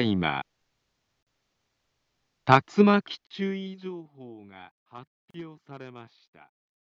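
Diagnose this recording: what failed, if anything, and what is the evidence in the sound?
The failure is at the codec stage: gaps at the joins of separately encoded pieces. Short silences of about 40 ms cut into continuous sound at 1.23–1.27 s, 3.27–3.31 s and 5.31–5.34 s, about 2.0 s apart. Each encoder run left its start-up delay and last-frame padding in place, so every join carries dead air with smeared edges. Unlike a network dropout, the spacing and length are regular, and the sound resumes where it stopped, with nothing missing.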